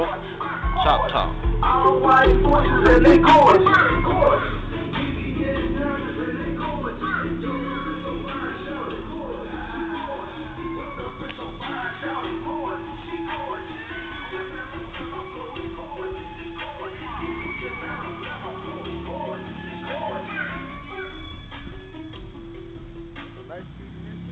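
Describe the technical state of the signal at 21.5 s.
At 21.5 s the audio is intact with no fault, carried through a call path whose bandwidth stops at 8 kHz, which fits a G.722 wideband codec.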